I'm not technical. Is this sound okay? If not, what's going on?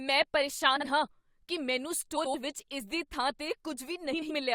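No. Frames out of order at 0.76–0.85 s (just before "ਹਾਂ ਕੀ ਮੈਨੂੰ"), 2.17–2.35 s (just after "ਹਾਂ ਕੀ ਮੈਨੂੰ") and 4.13–4.31 s: two tiny neighbouring pieces of the speech play swapped, giving a brief garbled flutter.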